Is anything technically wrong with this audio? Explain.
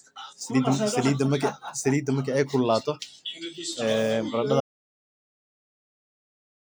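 Yes. At 4.60 s the speech suffers an audio dropout to silence that lasts to the end. It is likely a lost input written as silence: dead silence with no room tone, unlike a gate or fade.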